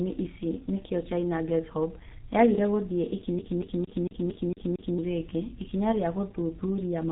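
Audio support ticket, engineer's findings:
G.723.1 codec damage, whole clip. Speech muffled and hoarse, consonants smeared. Nothing above 3.8 kHz. Heavy low-bitrate damage, consistent with a G.723.1 path near 6 kbit/s. Coarse 30 ms frames and a slow voice model blur fast articulation.

CD stuck on one turn, 3.39 to 4.99 s, right after "yagire gũthiĩ". Same 0.23 s fragment repeats 7 times, with a brief mute at each jump. Rapid, even stutter. Probable disc scratch throwing the laser back one track every revolution.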